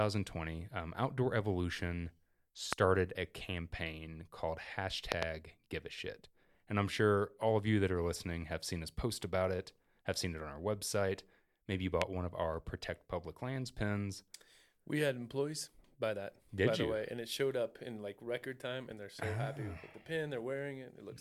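Sharp loud pops jump far above the speech at 2.73 to 2.75 s, twice in quick succession at 5.12 to 5.25 s, and at 12.02 to 12.04 s. These are likely sudden voltage pulses from a plug, switch or static.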